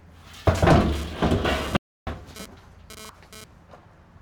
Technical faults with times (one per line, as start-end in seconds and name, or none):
0.95-3.44 GSM phone buzz
1.77-2.07 audio dropout to silence